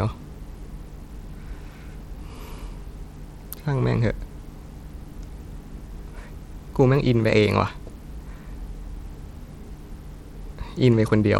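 Bluetooth SBC compression runs throughout the speech, its likely cause a low-bitrate link, the plainly audible damage fitting roughly 96 kbps. Starved of bits, the upper sub-bands lose their treble or leave it flickering, while coarse quantisation leaves a gritty noise and aliasing.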